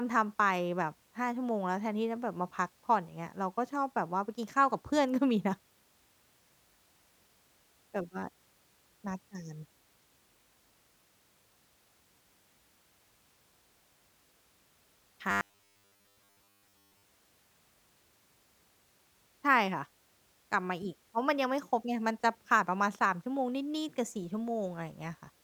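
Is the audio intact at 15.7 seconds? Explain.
No. At 15.7 seconds the speech is inside a stretch of robotic sound from repeated short buffers, running from 15.31 to 17.03 s. It turns into a rigid, metallic buzz fixed at 100 Hz that still loosely tracks the words. The likely cause is new audio arriving too slowly, so playback keeps looping the last 10 ms, which sets that pitch, while roughly 70% of the real signal is skipped. Unlike gaps or dropouts, there is no silence, only the steady buzz.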